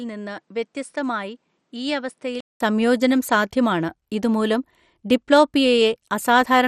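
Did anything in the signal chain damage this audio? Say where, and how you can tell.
Yes. MP2 compression runs throughout the clip. Nothing reaches above 14.2 kHz, and the speech has a plainly audible gurgling, granular edge. This is the codec stage, likely an MPEG Layer II encode starved of bits, which fits a stream around 64 kbps. With the sound carved into 32 sub-bands, the top bands get no bits and go silent. The remaining bands are quantised so coarsely that the noise swirls audibly around the speech.

Input switched to a poorer device from 0 to 2.6 s. This is at the capture or driver stage. That opening stretch cuts off above 10.5 kHz and sits roughly 10 dB quieter, with a new noise floor around 45 dB below the speech. A 200 ms gap marks the switch, after which the fuller sound returns with "സംയോജനം സാധ്യമാണ് ഇത് മൂലം". The band, level and noise all change together, which points to a different, narrower microphone path feeding the recording at first.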